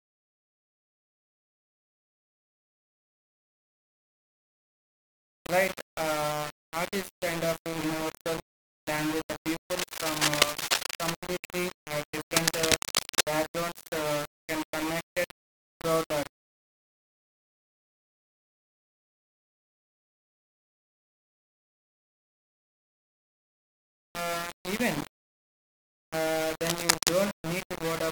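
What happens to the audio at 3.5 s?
At 3.5 s the speech is coated in grainy, gritty distortion that rises and falls with it, and that's been there from the very start of the clip. It's most likely low bit depth without dither: the signal rounded to roughly 4 bits, so the error tracks the signal instead of sitting as a steady hiss. The noise sits only about 10 dB under the speech, and the quieter bits break up or sputter between steps.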